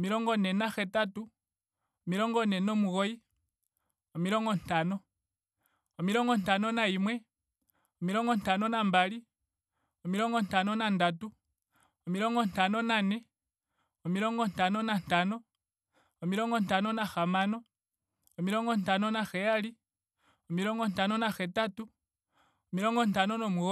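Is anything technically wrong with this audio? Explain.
No, the speech signal shows no technical faults.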